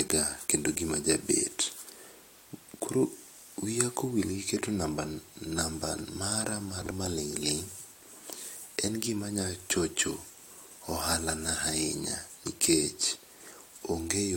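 At 6.81 s the speech breaks into a brief garbled flutter lasting until 6.91 s. This is frames out of order: two adjacent runs of about 46.4 ms each were decoded in swapped sequence, which fits runs of two frames apiece. The stretch plays with its halves exchanged. Unlike a dropout or a repeated frame, nothing is missing or duplicated, and the timing afterwards stays intact.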